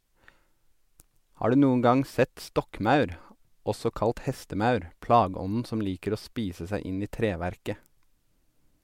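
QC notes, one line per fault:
No audible technical faults are present in the speech signal at any point.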